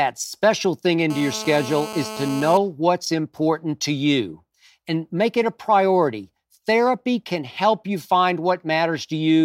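GSM phone buzz runs from 1.10 to 2.58 s. A nearby 2G handset on a call transmitted in bursts 217 times a second, and the audio circuitry rectified them, giving a steady, raspy 217 Hz buzz full of harmonics, about 12 dB below the speech.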